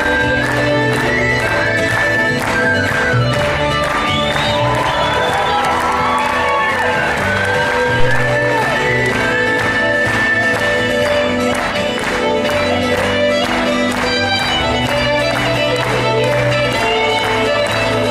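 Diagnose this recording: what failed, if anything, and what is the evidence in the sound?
A phantom power thump in the analogue wiring stage: at 8.00 s a deep, low-frequency thud hits a peak of about -4 dBFS and dies away with a decay of roughly 81 ms, fully gone by 8.36 s. A supply voltage was switched on or off on a live input, and that DC step was pushed through the coupling capacitors. On a waveform it shows as a large one-sided excursion with an exponential tail; on a spectrogram, a bright vertical burst concentrated in the lowest bands.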